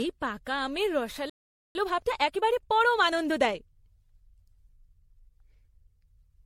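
A speech clip whose whole length sounds swirly, smeared and hollow, with blurred attacks. That is more damage than one low-rate pass would explain, and is likely generation loss: repeated MP3 decoding and re-encoding, around ten times, on shifting frame grids, which fits a 64 kbit/s MP3 chain. At 1.30 s, right after "এই পাকা আমের", a playback stall occurs: the player likely starved of data or was blocked, so the sound cuts out mid-flow for about 0.45 s until 1.75 s. From 1.75 s to 3.55 s comes time-compressed catch-up, as the player clears its backlog by cutting and cross-fading small pieces. The speech runs about 1.25 times fast at unchanged pitch.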